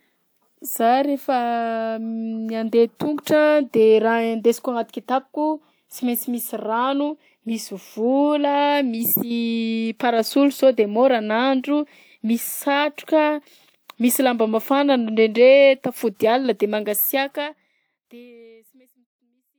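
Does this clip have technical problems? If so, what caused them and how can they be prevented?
No, the clip has no technical problems. The speech fades out smoothly from around 17 s to the end, with no click or hard edge.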